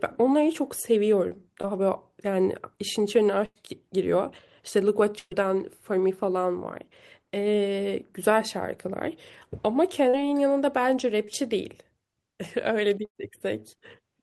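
At 1.61 to 1.65 s there's short concealed packet loss: about 20 ms of the call audio arrived too late. The receiver stretched the last sound over the hole, which leaves a quick smear. The same brief wobble recurs at 10.09 to 10.15 s and 11.25 to 11.29 s.

The bigger dropouts are bursts of packet loss at 3.45 to 3.57 s, 5.19 to 5.33 s and 13.05 to 13.17 s. Each one loses about 100 to 120 ms. The concealment holds the last sound as a buzz or hiss and fades it down, going fully silent for about 40 ms at 5.2 s, then the speech picks up further on. The call's coding noise and its top end, which stops around 12 kHz, fit Opus at roughly 32 kbps.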